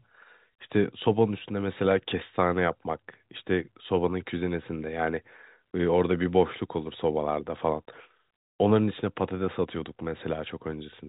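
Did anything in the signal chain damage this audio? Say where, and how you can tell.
No, nothing in the chain damaged this one; it's a call recording that went through a G.711 mu-law path at 64 kbps, so you hear the usual telephone band with nothing above 4 kHz, which is just how that codec works.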